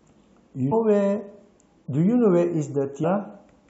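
At 0.71 s and again at 3.03 s, compressed frames are skipped. The speech jumps ahead by roughly 150 ms each time, which fits about seven frames of 23.2 ms.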